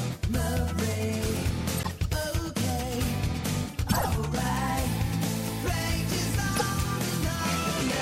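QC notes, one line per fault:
1.77–1.91 s, 3.89–4.07 s, 6.53–6.62 s: corrupt frame decoded. Damaged compressed frames were played anyway, so misread gains and codes put energy at wrong frequencies, heard as short squeaky noise bursts, the first quieter, the later two louder. Spectrogram shows brief out-of-place blocks; waveform shows spikes.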